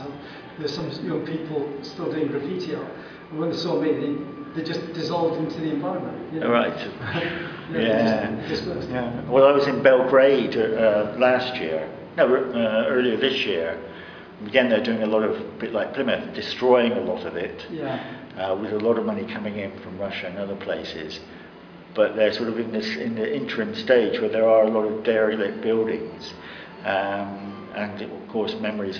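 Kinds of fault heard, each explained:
Nothing stood out on listening; no problem could be heard anywhere in the audio.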